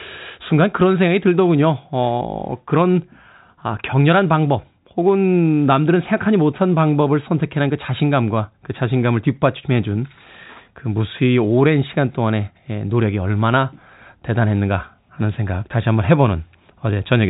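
No technical faults can be heard in this recording.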